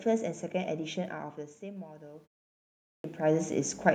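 Automatic gain rising from 1.59 s to the end: the input dropped about 17 dB, so the gain control gradually pushed the level up about 8 dB, swelling voice and background together.

Clipped start after a pause at 2.57 s: after a 0.38 s silence, the output device was still waking and swallowed the first 0.47 s, so speech resumes abruptly, missing its opening sounds.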